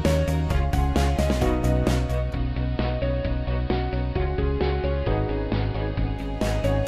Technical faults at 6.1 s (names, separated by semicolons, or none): digital radio blending to analogue